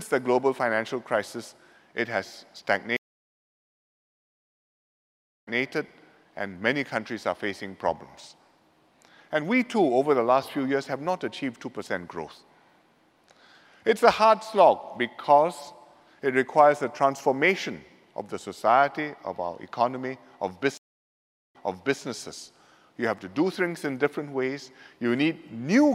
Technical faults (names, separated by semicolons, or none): stream reconnect